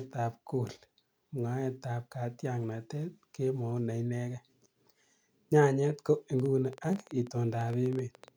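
From 6.40 to 8.29 s, a train of clicks, about 10.6 per second at uneven spacing and slightly louder than the speech, likely interference. It shows as thin vertical spectrogram lines and sharp waveform spikes.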